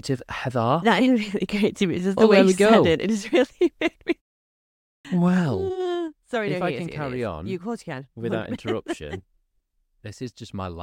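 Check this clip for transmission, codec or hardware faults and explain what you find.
Two faults stand out in this speech clip.

At 4.97 s, after a pause of 0.84 s, the speech bursts in abruptly with its onset missing. This is a clipped start after a pause: the output device slept through the silence and took about 78 ms to wake, swallowing everything until 5.05 s.

From 5.22 to 6.11 s a fine ticking rides on the speech as the level drops by roughly 10 dB. This is zipper noise: the gain moves in unsmoothed 2 dB steps, about seven a second, and each jump leaves a small click.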